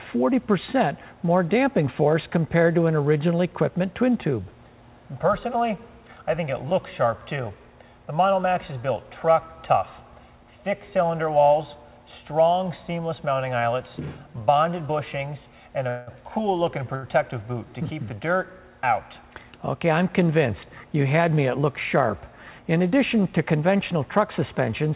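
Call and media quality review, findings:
Call audio freeze, 15.89 to 16.10 s: the last sound carries on as a fading buzz or hiss for about 180 ms, then the audio picks up where it stopped. Nothing is lost, it's just pushed later. Likely the jitter buffer running dry while packets were held up, with the receiver filling in.

Short stall from a late packet, 16.95 to 17.06 s: one sound gets held about 75 ms too long, with a buzz or dip, then continues from the same spot. The jitter buffer ran empty waiting on a packet and the receiver stretched the last bit of audio. Nothing is dropped, it just lands 75 ms late.

Jitter buffer speed-up, 20.97 to 21.96 s: the audio runs at about 106% speed for roughly a second at unchanged pitch, so it sounds a bit hurried. The buffer was over its target, so the receiver trimmed short pitch-period chunks in a row, taking out around 70 ms in total to bring the delay back down.

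The call path itself is band-limited, with nothing above 4 kHz, which fits G.711 mu-law at 64 kbps.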